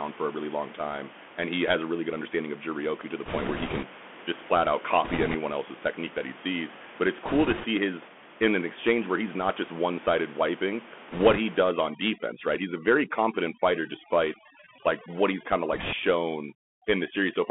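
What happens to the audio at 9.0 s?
At 9.0 s the speech carries the Bluetooth CVSD headset codec damage present through the whole clip. Band-limited to about 200 Hz to 3.4 kHz, it sounds thin and boxed. Each sample codes one up-or-down step, so loud high sounds outrun the step and distort, s sounds turn scratchy, and a granular hiss sits under the speech, with room noise about 18 dB down.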